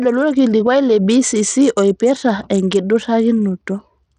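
Right through the speech, the top end stops around 10.4 kHz and the treble flickers with grit, likely Bluetooth SBC compression at something like 80 kbps.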